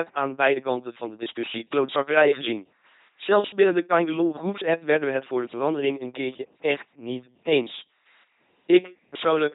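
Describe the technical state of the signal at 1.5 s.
At 1.5 s the speech carries LPC-10 vocoder damage, as it does throughout, consistent with a 2.4 kbit/s coder. Each frame is rebuilt as pure pulse-train buzz or pure noise through a smooth ten-pole envelope, giving a robotic voice. The spectrogram shows rigid harmonic combs or flat noise, with nothing above 3.9 kHz.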